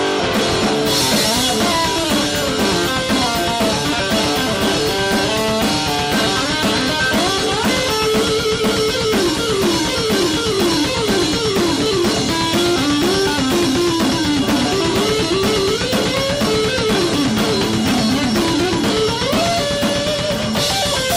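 No technical faults to report anywhere in the clip.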